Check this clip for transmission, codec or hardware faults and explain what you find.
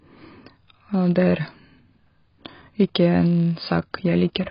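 Two faults run through the whole speech clip. A filter restarted on every block resets its state each block. Each restart leaves a small click, heard as a 100 Hz buzz tracking the speech level. The heavy band-limiting, with nothing above 5.2 kHz, is likely AAC compression at a low bitrate. The speech sounds dull and smeared, with warbling on sustained sounds.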